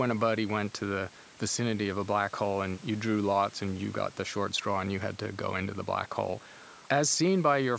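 No technical faults are audible.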